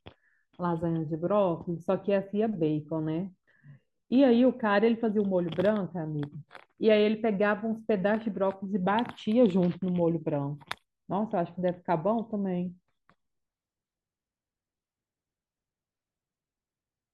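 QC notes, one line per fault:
No faults heard.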